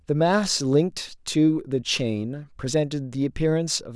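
Nothing goes wrong anywhere in this short bit of speech, so there's no technical fault to point to.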